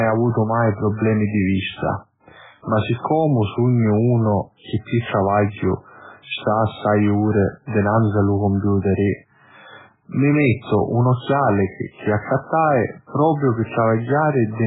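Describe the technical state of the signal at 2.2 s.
MP3 compression at 2.2 s, as throughout the clip. The speech has nothing above 3.8 kHz and sounds watery and swirly, with smeared consonant onsets. The likely cause is a starved encoder, consistent with a very low bitrate near 8 kbps, cutting the treble and toggling weak frequency lines between frames.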